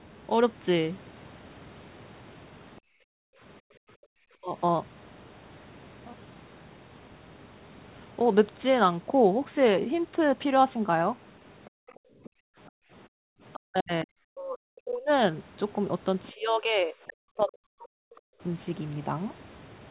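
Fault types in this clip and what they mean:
background gated by the echo canceller: while the loudspeaker played, the echo canceller cut the microphone hard, so room sound drops by up to about 39 dB around 2.8–4.1 s and 11.7–13.3 s.
speech suppressed in double talk: with both sides talking, the canceller likely turned the talker down with the echo; speech dips by up to about 40 dB near 4.4 s, 13.6–15.1 s and 16.3–18.3 s.
other side's voice leaking through: echo cancellation likely missed part of the loudspeaker signal, leaving a faint second voice about 20–25 dB below the talker around 11.7–12.3 s, 13.5 s and 16.2–17.1 s.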